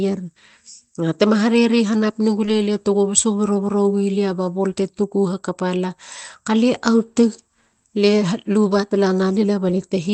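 At 2.45 to 2.49 s, short concealed packet loss: about 20 ms went missing and was resynthesised, heard as a brief smear, and seen as a smoothed, repetitive patch in the spectrogram.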